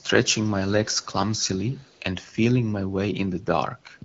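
An echo canceller likely passed loudspeaker pickup from 0.85 to 2.03 s, an echo leak: a very faint copy of the speech trailing 0.33 s behind.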